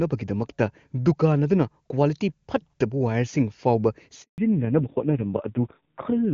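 A handover gap runs from 4.22 to 4.38 s. As the call is passed from one network link to another, no speech frames reach the receiver for 160 ms, so the speech fades out within a few tens of milliseconds and leaves a short dead silence until the new link begins delivering audio. Whatever was spoken inside that window is simply missing.

A fallback to narrowband follows straight after, from 4.38 s to the end of the clip. Up to this point the speech has the wide, clear top end of the AMR wideband (HD Voice) codec, which fits a rate around 23.85 kbit/s. After the handover everything above 4 kHz is gone, and the speech turns muffled, thinner and rougher. That combination of lost bandwidth and grit points to AMR narrowband at a low rate, around 5.9 kbit/s.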